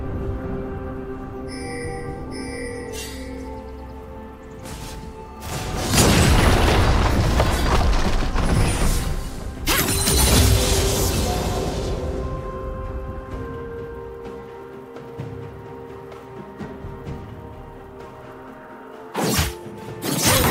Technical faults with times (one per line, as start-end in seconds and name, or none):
none